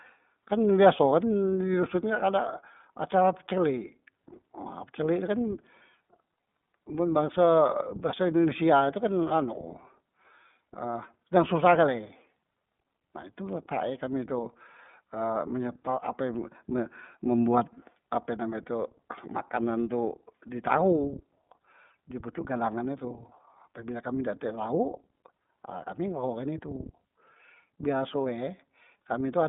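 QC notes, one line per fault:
Throughout, iLBC codec: every 30 ms frame is coded independently on a narrowband line, so the speech sounds thin, slightly rough and synthetic. A spectrogram shows nothing above 3.8 kHz and weak content below 150 Hz, a hard ceiling from the narrowband codec, here running at 13.33 kbps.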